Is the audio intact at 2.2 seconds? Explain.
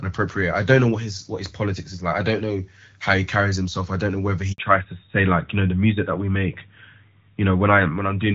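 Yes, at 2.2 seconds the audio is intact, with the speech coming through the AMR wideband (HD Voice) codec at 12.65 kbit/s and nothing breaking up, dropping out or glitching at that point.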